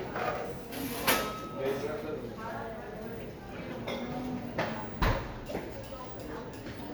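No technical faults can be heard anywhere in the clip.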